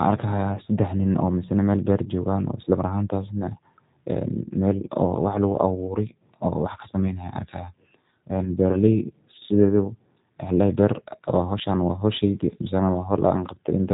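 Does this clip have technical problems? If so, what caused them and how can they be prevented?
Yes. The speech has G.729 codec damage from start to finish, and it's plainly audible. Nothing gets through above about 3.8 kHz, so it has that muffled narrowband phone sound. The codec doesn't send the waveform itself. It sends a vocal tract filter, a pitch predictor and a few pulses per short frame, so the rebuilt speech comes out rough and a bit synthetic. That roughness fits a low-rate mode around 8 kbit/s. To prevent it, record or route the call through a wideband codec such as G.722 or Opus instead of G.729.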